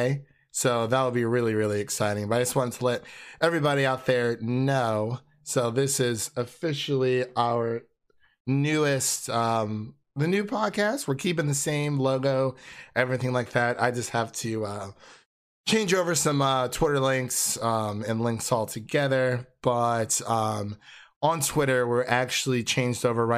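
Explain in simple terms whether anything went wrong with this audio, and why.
Nothing went wrong with this audio; there is no problem to explain.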